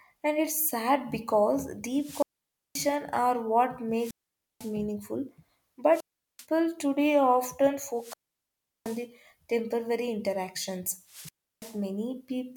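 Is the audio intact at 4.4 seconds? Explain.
No, 4.4 s lands right inside a wireless microphone squelch dropout that runs from about 3.94 to 4.76 s. The radio link from the mic fades, the hiss and static climb briefly, and then the receiver's squelch kicks in and mutes the output for roughly half a second, leaving a hole of near silence. At 4.4 s you're in that muted stretch, and the speech only comes back near the end of the span.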